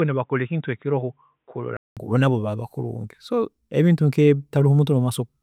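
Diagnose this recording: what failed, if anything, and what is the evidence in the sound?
From the start to 1.97 s the speech has nothing above 3.8 kHz, sits about 5 dB lower and carries its own faint noise floor. A 0.2 s silence follows, then full-band sound returns at "nabo baaba kulungi". The likely cause is an input switched to a poorer device at the driver stage. A codec band limit would not shift level, noise and bandwidth together at one gap.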